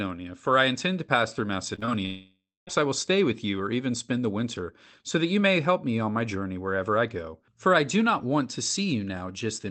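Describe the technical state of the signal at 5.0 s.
At 5.0 s the speech is intact, with no fault at that moment, and it carries only the ordinary coding character and the band limit of the call path it passed through.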